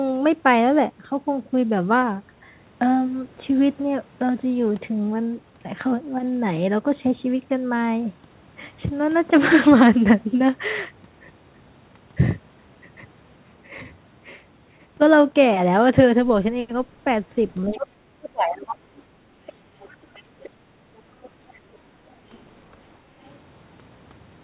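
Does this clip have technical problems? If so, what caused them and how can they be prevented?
Yes. Other side's voice leaking through appears at 17.68–17.8, 19.47–20.5, 21.22–21.59 and 23.25–23.35 s, about 20–35 dB below the talker, likely residual loudspeaker echo. On a spectrogram it shows as faint, separate harmonic traces. Better acoustic isolation or a headset prevents it.

Speech suppressed in double talk runs from 17.74 to 19.17 s, with about one second of the talker's voice dipping by up to about 35 dB. The waveform shows the envelope dipping, likely from the canceller clamping during overlap. A canceller with stronger double-talk detection prevents this.

Background gated by the echo canceller occurs at 19.45–19.75 and 20.58–20.86 s. In each, the room noise drops about 8 dB for about 0.2 s, leaving a visibly darker noise floor on the spectrogram. Comfort-noise injection or gentler suppression prevents it.

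Throughout the clip, the G.711 call path leaves nothing above 4 kHz.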